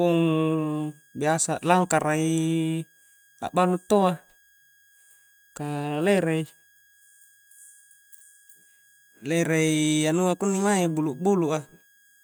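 A faint switching supply whistle sits under the speech throughout, wandering between about 1.64 and 1.65 kHz; unlike steady mains hum, it is high and drifting.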